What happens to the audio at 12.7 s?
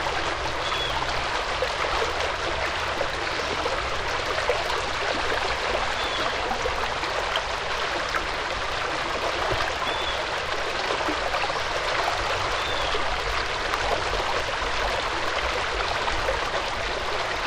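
At 12.7 s the filter restarted on every block, forgetting its state fifty times a second throughout the clip, so each block opens with a small transient, heard as a 50 Hz buzz that tracks the sound's level.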